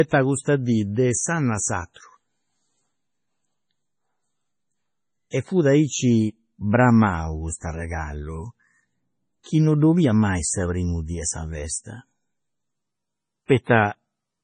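Throughout, the speech has a watery, swirling quality with metallic sibilants and no content above about 10.4 kHz, likely heavy MP3 compression at a low bitrate around 24 kbps. Pre-echo appears at 1.94, 5.30, 9.43 and 13.46 s. The codec's noise smears back across each block, so a short hiss of 26 to 39 ms precedes each attack rather than trailing it.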